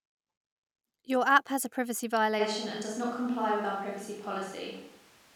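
At 2.41 s, right after "app has a privacy", the sound abruptly turns roomy and hollow, thinner in the bass, and stays that way to the end, most likely a switch to a distant microphone. Level holds roughly steady, but the room noise floor rises to about 25 dB below the speech, showing as a step up in the waveform's quiet gaps and weaker, reverb-smeared lows on the spectrogram.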